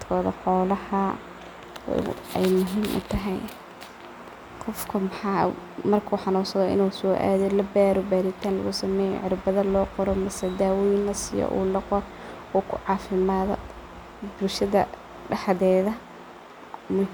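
The speech signal shows no technical faults at any point.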